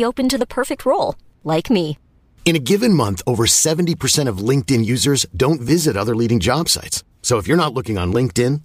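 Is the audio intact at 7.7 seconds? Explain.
Yes, the speech at 7.7 seconds is intact, with no dropout, click, distortion or other fault at that moment.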